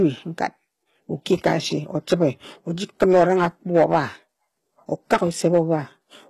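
Speech, with a plainly audible codec sound throughout: the treble is rebuilt rather than carried, so sibilants come across gritty and metallic and their upper harmonics don't line up with the lower band. This is likely HE-AAC compression at a low bitrate, around 16 kbps, whose spectral band replication copies lower bands upward under a coarse envelope. A spectrogram would show nothing above 12.3 kHz and a repeated, blocky texture in the top band instead of natural fine detail. Hard clipping hits four spans, at 1.33 to 1.53 s (overdriven by about 5 dB), 2.12 to 2.25 s (about 4 dB), 3.02 to 3.99 s (about 7 dB) and 5.13 to 5.74 s (about 8 dB). In each, the signal exceeded what a stage could pass and its crests were cut flat, adding crackle on the peaks. The waveform would show squared-off tops, and the spectrogram vertical bands of added harmonics reaching up toward the 12.3 kHz ceiling.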